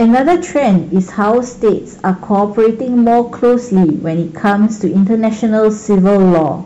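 Hard clipping runs through the whole speech clip. The signal is driven about 8 dB past what the stage can pass, so every peak is sheared off at a fixed ceiling, with roughly 7 percent of samples pinned there. The flattened tops add harmonics high above the fundamental, heard as a harsh, crackling fuzz on each loud syllable. The waveform shows squared-off plateaus at both rails, and the spectrogram shows broadband vertical smears reaching into the upper kHz range at those peaks.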